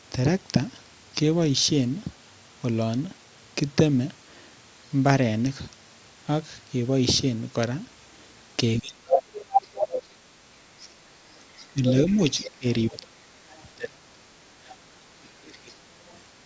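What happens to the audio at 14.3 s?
Between 13.75 and 14.31 s the speech drops sharply, by about 30 dB at its deepest. That points to speech suppressed in double talk: the echo canceller likely mistook overlapping far-end audio for echo and attenuated the near-end talker with it.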